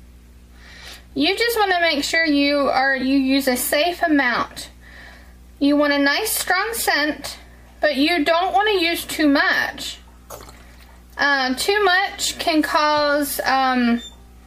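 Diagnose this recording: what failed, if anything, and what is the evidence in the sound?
Nothing failed; no faults present.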